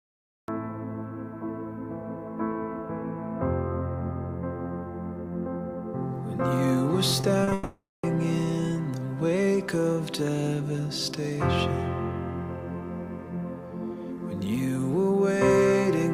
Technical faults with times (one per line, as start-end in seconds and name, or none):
0.00-0.48 cut-off start
7.21-7.53 short concealed packet loss
7.53-8.05 long network dropout